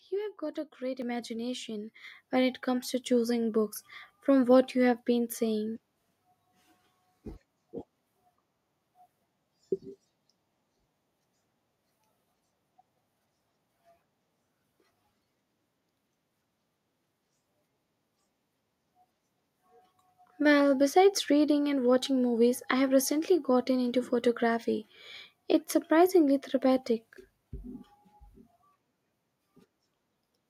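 The call software judged the microphone too quiet and twice raised its input volume in a single step, a microphone volume stepped up fault: at 1.02 s, after "have got a great", by about 6 dB, and at 2.04 s, after "got a great imagination", by about 5 dB. Each time the speech and background jump louder together, mid-sentence.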